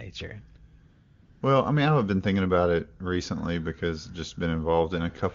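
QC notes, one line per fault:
0.91–1.41 s, AMR comfort noise: for half a second the phone judged the talker silent and stopped sending speech frames, so the receiver filled the gap with synthetic noise built from a rough estimate of the background's level and spectral shape. The real background drops out and is replaced by a steady, smooth hiss that switches in and out abruptly. On a waveform this shows as a flat, even band. On a spectrogram it shows as a uniform, featureless noise block with hard vertical edges. Around it the wideband codec sounds clear, which points to a high AMR-WB rate.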